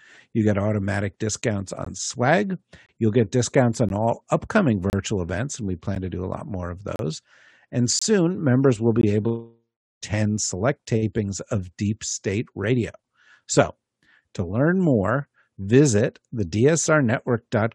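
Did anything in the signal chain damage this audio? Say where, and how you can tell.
Yes, there are gaps between stream segments at the network stage. Hard-edged silences fall at 1.85, 2.86–2.89, 3.89, 4.90–4.93, 5.95, 6.96–6.99, 7.99–8.02 and 9.01 s, about one per second. Segment timestamps don't meet, so the player inserts 9 to 33 ms of silence. No audio is lost.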